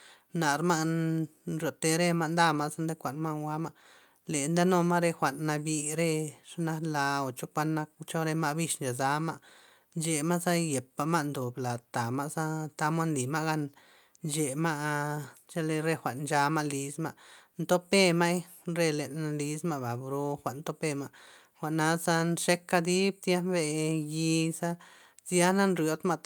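Speech recording with no audible technical faults.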